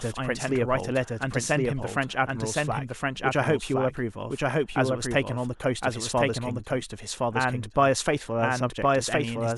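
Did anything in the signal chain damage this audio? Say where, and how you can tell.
Yes. A doubled audio track runs through the whole speech clip: every phrase returns as a second, full-band copy about a second later, at roughly the same loudness, so the two streams overlap. This is likely a capture-stage fault, with the signal picked up a second time through a slower driver or buffer path. It differs from acoustic echo or reverb because there is only one repeat, with no decay and no room colouring.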